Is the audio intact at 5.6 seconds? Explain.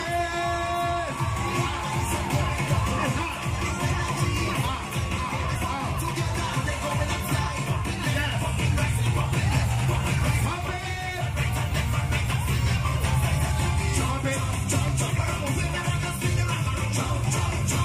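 No. A skip ahead at 5.55 to 5.57 s drops about a second of audio, likely discarded by an overflowing jitter buffer, so playback jumps forward with no gap.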